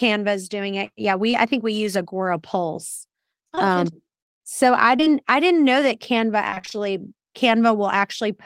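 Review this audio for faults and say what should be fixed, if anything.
Short concealed packet loss at 1.31–1.35 s, 3.55–3.59 s, and back-to-back at 4.97–5.08 s between "um so I" and "I didn't know that": each roughly 20 ms hole is bridged by extending the preceding sound, leaving isolated smears rather than sustained choppiness.

Repeated packet loss (robotic sound) from 6.50 to 6.76 s: short gaps, none longer than 23 ms, recur so closely that nearly half the stretch is synthetic continuation, giving a chopped texture instead of single ticks.

Both would be prevented by a steadier network path with a larger jitter buffer or forward error correction to recover late or lost packets.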